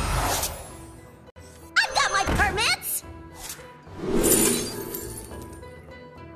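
At 1.30 s the sound drops out abruptly and returns at 1.36 s. This is a gap between stream segments. The timestamps of two adjoining segments do not quite meet, and the player fills the space with silence. About 58 ms of silence is inserted. Both edges are hard, so the hole sounds like a sudden cut and restart rather than a fade. Nothing is missing from the audio on either side. It is only pushed later by the gap.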